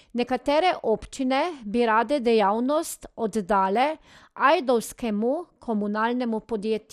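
Speech, degraded throughout by what is likely MP2 compression. Nothing is present above about 15.1 kHz, and the upper bands come and go rather than staying steady, leaving a dull top end with a gurgling, grainy texture on the speech that is plainly audible. That pattern fits MPEG Layer II working at a rate around 80 kbps. Too few bits are shared across its sub-bands, so the highest ones drop out and the rest are coarsely quantised.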